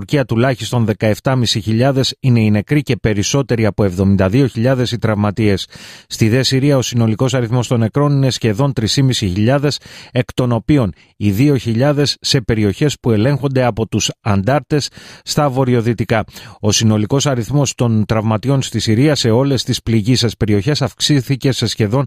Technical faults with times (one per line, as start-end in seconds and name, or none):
none